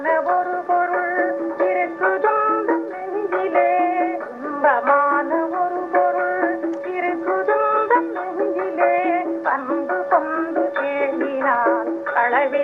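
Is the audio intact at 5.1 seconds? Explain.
Yes, the audio is intact at 5.1 seconds, with no dropout, click, distortion or other fault at that moment.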